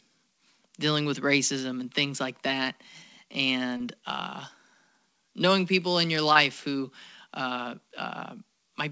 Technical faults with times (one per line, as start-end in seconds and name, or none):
2.64-2.67 short concealed packet loss
3.77-3.81 short concealed packet loss
6.33-6.37 short concealed packet loss